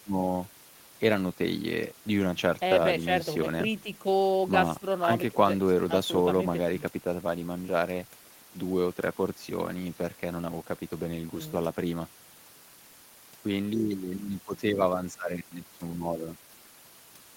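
No technical faults can be heard anywhere in the recording; the speech signal stays continuous and stable throughout.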